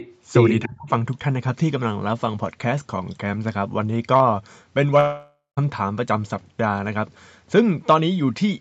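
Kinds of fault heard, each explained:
Echo leak: At the very start, from 0.00 to 0.14 s, a faint second copy of the speech trails the original by about 292 ms, roughly 20 dB below it. It is likely that the other end of the call was on a loudspeaker and its echo canceller did not fully remove what its microphone picked up, so a delayed scrap of the sound was sent back into the line.
Speech suppressed in double talk: Between 0.66 and 0.91 s the speech suddenly sinks, dropping by about 25 dB at its deepest, with the dip lasting roughly 0.3 s in all. This is likely the echo canceller's reaction to both sides talking at once: unable to tell the local talker apart from loudspeaker echo, it turned everything down together, swallowing part of the talker's speech.
Long network dropout: At 4.99 s the audio stops arriving and, instead of the speech, a continuation of the last sound fills in and fades away, followed by about 170 ms of near silence. 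The speech returns at 5.59 s, with roughly 0.58 s of the original simply gone rather than delayed. The likely cause is a gap in the network stream, covered over by the receiver's concealment until real audio resumed.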